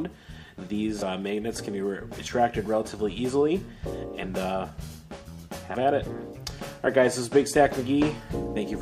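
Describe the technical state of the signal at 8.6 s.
At 8.6 s the signal is intact, with no audible fault at that moment.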